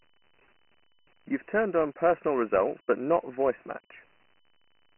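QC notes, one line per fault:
throughout, Dialogic VOX ADPCM: nothing above 3 kHz, and heavy gritty hiss tracks the speech, as coarse 4-bit steps fit a 24 kbps stream.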